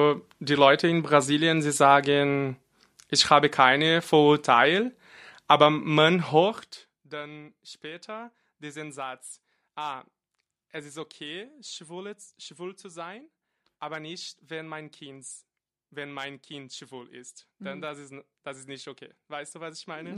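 No technical faults can be heard in this speech recording. The level changes that occur are smooth, fader-like moves, a normal part of how the sound was mixed.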